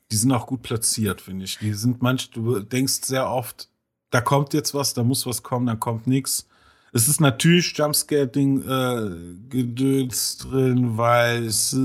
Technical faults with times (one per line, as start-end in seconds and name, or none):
8.85-11.85 time-stretched section